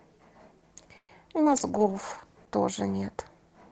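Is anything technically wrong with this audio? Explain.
Yes, this speech clip has four call-transport problems packed into about a second and a half.

At 0.97 to 1.12 s there's a call audio freeze: the sound smears into a fading buzz, then about 60 ms of silence. That's likely packets arriving late and the jitter buffer running dry. Nothing is lost, just 114 ms of inserted pause.

At 1.45 to 1.49 s there's a skip ahead: roughly 70 ms of audio gets dropped, and playback jumps forward with the two sides spliced almost directly together.

From 1.45 to 2.59 s there's a call bitrate drop: Opus falls from 32 to 15 kbps, bottoming out for about a second, so the sound goes rougher and more watery.

From 1.71 to 2.22 s there's a jitter buffer slow-down: repeated pitch periods add 54 ms, so the audio drags at about 91% speed with unchanged pitch.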